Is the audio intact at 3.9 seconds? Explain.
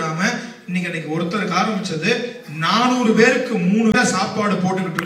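No. Damaged data in a compressed stream breaks the audio from 3.91 to 3.95 s, a span of about 44 ms. Part of the encoded stream there is corrupt, so the decoder misreads or discards those frames, loses its place in the bitstream and has to hunt for the next valid frame header before it can resume. The result is a short chirp, squawk, click or hole cutting across the sound at that point.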